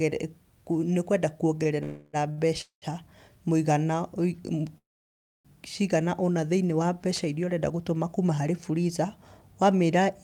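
At 1.63 s a packet arrives late and the jitter buffer runs dry, so the receiver holds the last bit of speech for about 19 ms. This short stall from a late packet sounds like a slightly stretched sound with a faint buzz. Nothing is lost, and the speech resumes exactly where it paused.

From 1.83 to 2.16 s a call audio freeze follows, likely caused by packets being held up in transit. The decoder keeps extending the last sound for 300 ms. It never falls to silence, so the listener hears a fading buzzy tail before the speech picks up again.

At 2.31 to 2.40 s another late packet causes a second short stall. This time 60 ms of held sound fills the gap, which is long enough to hear as a drawn-out syllable with a slight dip.

From 2.61 to 2.85 s a second freeze, likely from delayed packets again, inserts 206 ms. The held sound fades, and about 110 ms of that is silence before the speech continues.

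Between 3.73 and 3.98 s a jitter buffer slow-down occurs. To rebuild its reserve, the receiver repeats single pitch cycles, adding 39 ms. The speech plays at about 87% speed with its pitch unchanged, so the sounds in that stretch come out drawn.

From 4.78 to 5.48 s the longest call audio freeze, likely caused by a long hold-up of packets, inserts 669 ms. After a brief buzzing tail, about 620 ms of silence follows. The speech then resumes with "cigana ũna thĩiniĩ wa", and no speech is missing across the gap.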